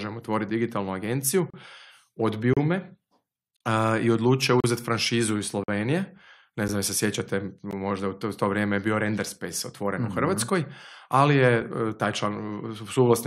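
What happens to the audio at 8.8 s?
Nothing goes wrong at 8.8 s; the speech continues intact through that moment with no dropout, click, distortion or other audible fault.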